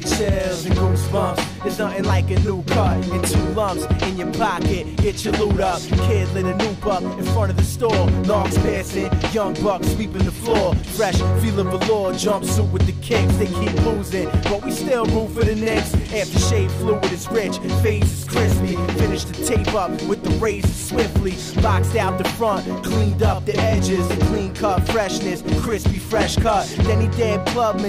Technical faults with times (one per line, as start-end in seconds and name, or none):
18.28-23.41 sample clock jitter